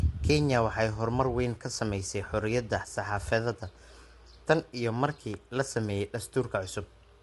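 From the start, the speech sounds rough and grainy, likely from low-delay AAC compression at a low bitrate. On a spectrogram, noise fills the gaps between harmonics and everything stops at 11.6 kHz.

From 5.34 to 5.36 s, between "tan iyo" and "la sameeyay", a single loud pop rises a few decibels above the speech, likely a voltage spike. It appears as a sharp waveform spike and a vertical spectrogram line.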